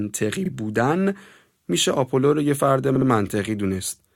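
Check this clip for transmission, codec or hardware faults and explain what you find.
Two short stutters point to repeated frames, where a run of compressed frames was written or sent again and the decoder played it again. At 0.45 to 0.49 s a 40 ms block, which fits two frames, plays once more. At 2.95 to 3.07 s a 60 ms block plays twice more. Together the repeats add 160 ms to the speech.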